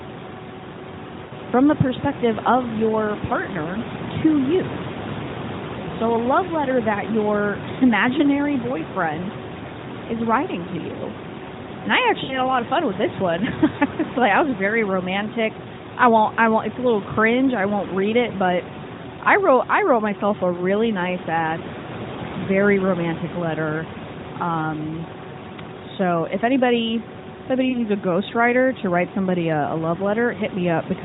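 Lost AMR speech frames at 1.26–1.33 s, 4.92–4.96 s, 12.24–12.39 s and 27.70–27.82 s. Each time, radio errors corrupted speech frames, and the decoder filled the gap by repeating the last good pitch and vocal-tract shape at falling gain. The short gaps, the first just before "from the perspective of", the second after "your partner to you", and the last between "so if anybody if" and "a ghostwriter to write", are brief, and the single lost frame in the second sounds like a brief warbling dip. The longer 12.24 s gap, which fits about three lost 20 ms frames, stretches and fades before the voice returns rough for a moment. All of this sits within the narrowband mobile sound, with nothing above 4 kHz, consistent with the 12.2 kbps AMR mode.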